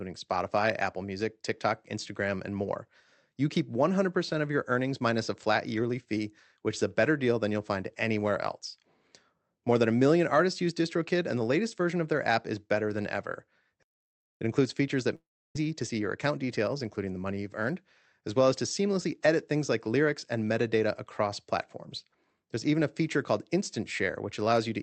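At 13.83 s, right after "is better than ever", the speech stops dead and the line goes silent for about 0.58 s before resuming where it left off. This is a playback stall, likely the player running out of buffered data or having its output thread blocked.

From 14.41 s to 17.40 s, ending just before "you've earned as well", the speech sounds hurried at an unchanged pitch. This is time-compressed catch-up: the player trims and cross-fades small slices to clear the backlog from the stall, running at about 1.1 times normal speed.

Within that hurried stretch, from 15.15 s to 15.57 s, the sound smears into a buzzy continuation of the last syllable that fades into near-silence, and then the speech comes back further on with about 0.4 s missing. This is a long network dropout, likely a gap in packet arrival. The receiver's concealment filled the hole by extending the last sound, and that fill decayed into silence for roughly 0.31 s. 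All of this passes through the call codec, whose band-limit cuts off everything above 8 kHz, which fits Opus at around 48 kbps.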